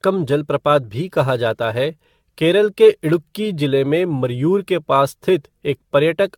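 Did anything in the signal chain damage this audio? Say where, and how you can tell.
Yes, and it's at the codec stage. The whole clip has that swirly, hollow quality with smeared consonant attacks, far worse than a single decent encode would leave, and there's nothing above 17 kHz. That's generation loss, most likely from the speech being run through AAC-LC around ten times, at something like 96 kbit/s. Each re-encode quantises on a shifted frame grid, so the noise and spectral holes pile up instead of cancelling.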